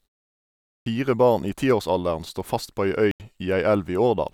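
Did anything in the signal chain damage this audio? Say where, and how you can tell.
Yes. At the playback stage there is a clipped start after a pause: after 0.82 s of silence, the first 42 ms of "barn i tiårsalderen står" are swallowed while the output device wakes, so the onset begins abruptly.

At the codec stage, a corrupt frame was muted: a hard-edged 86 ms silent hole runs from 3.11 to 3.20 s. That is one damaged frame the decoder rejected and replaced with silence, with timing preserved.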